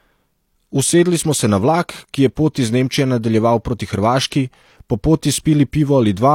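Speech with two instances of pre-echo: a brief hiss at 4.30 s, just before "po poti", smeared over about 16 ms, and another at 5.72 s, after "po poti", spread about 10 ms. A transform codec's quantisation noise, sized for each attack, is spilling into the quiet moment ahead of it.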